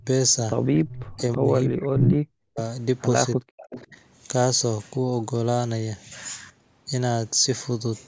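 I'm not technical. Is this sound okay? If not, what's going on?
No. The call has two kinds of problem, and they tend to show up together.

The first is speech suppressed in double talk. The voice drops sharply or cuts out in pieces at the very start (0.0 to 0.07 s), from 1.36 to 2.59 s, and from 3.36 to 3.96 s. The likely cause is that both people spoke at once, and the call's echo-removal system couldn't tell the talker apart from the other person's voice coming back through its own loudspeaker, so it turned everything down. Here the voice itself gets quieter or goes missing. Nothing extra is added.

The second is echo leak. A repeat of the voice arrives about a third of a second late, at 0.89 to 1.38 s, 1.98 to 2.12 s and 3.62 to 3.87 s. Each time the delay is the same, which sets it apart from natural room reverberation. This is likely because one side is on a speakerphone whose echo removal let some of its own pickup slip back. 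The repeat around 2.0 s is about as loud as the real voice, while the others sit well below it.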